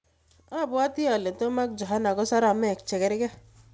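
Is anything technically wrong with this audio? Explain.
Yes. From 0.52 s to 2.31 s the speech and the background noise swell together, climbing by about 7 dB over nearly two seconds rather than jumping at once. This is automatic gain rising: the call's gain control judged the input too quiet and slowly turned its gain up, lifting everything it hears at the same rate. Across the clip the audio stops at 8 kHz, which fits a wideband call codec such as G.722.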